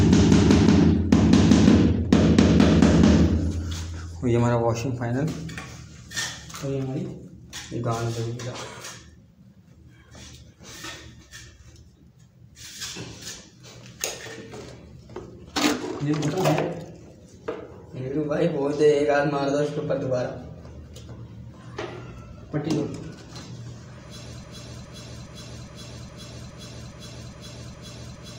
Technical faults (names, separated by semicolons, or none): broken-record loop